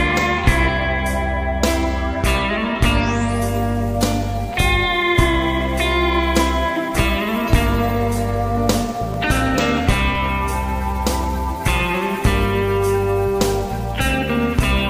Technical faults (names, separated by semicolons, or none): DC step